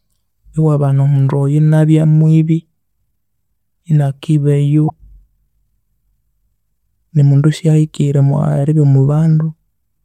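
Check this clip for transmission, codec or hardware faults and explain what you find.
One fault stands out, at 4.86 to 4.91 s: damaged data in a compressed stream. For about 50 ms the speech gives way to a brief glitch that has no relation to the surrounding sound. A section of the encoded stream was corrupted, so the decoder could not read those frames correctly, lost frame sync and had to search forward for the next valid header. The garbled output during that search is what produces the glitch.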